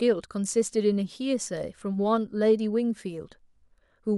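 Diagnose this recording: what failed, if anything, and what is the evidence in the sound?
Nothing failed in this recording.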